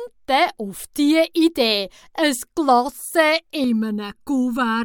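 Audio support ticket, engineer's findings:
Channel delay (comb filtering), 3.64 s to end of clip. Sound turns hollow and phasey. One channel lags by under a millisecond before mono sum; cancellation notches from around 700 Hz upward, evenly spaced. Probable component: downmix or channel alignment stage.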